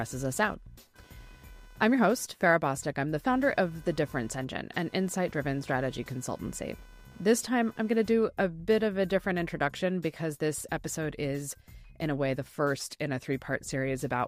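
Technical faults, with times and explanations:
0.0–8.26 s, computer activity noise: a buzzy, chirpy layer pulsing at around 500 Hz sits roughly 30 dB under the sound, then drops out. It follows the machine's workload rather than the audio, because processor or graphics load changes are shifting the ground the audio circuit shares.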